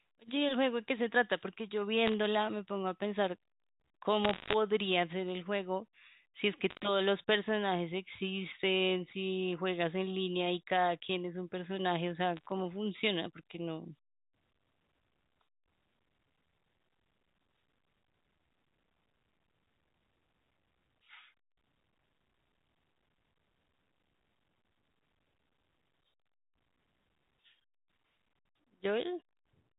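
Four short bursts of crackle cut through the speech: 2.06 to 2.14 s, 4.25 to 4.54 s, 6.70 to 6.82 s and 12.37 to 12.46 s. These are bit errors on a digital phone line. Flipped bits on the A-law G.711 stream each corrupt a single sample, and hits on the sign or upper bits come out as sharp ticks. The 4.25 s burst is the longest and densest. The one at 12.37 s is the sparsest.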